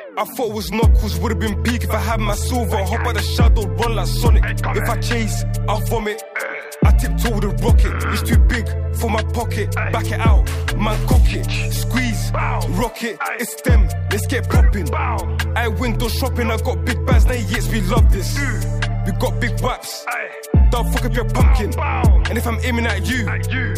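There's one fault in this audio: a block of digital silence at 15.95 s. The sound drops to silence for about 1.45 ms and snaps straight back with no fade, so it comes across as a tick or dip. The gap fits a 64-sample buffer that wasn't filled in time.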